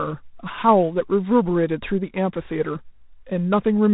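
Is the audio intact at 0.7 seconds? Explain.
No, the whole clip carries G.726 ADPCM damage. The coarse adaptive-difference coding, consistent with 24 kbit/s, leaves a harsh, rasping hiss that tracks speech level.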